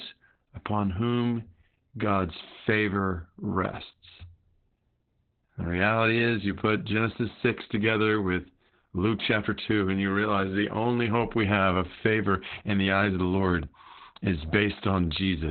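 From start to finish the speech sounds muffled, hoarse and slightly robotic, with nothing above 4.3 kHz. This is heavy Opus voice compression. The SILK coder has cut the band to narrowband and coded the excitation coarsely, which fits a bitrate near 8 kbps.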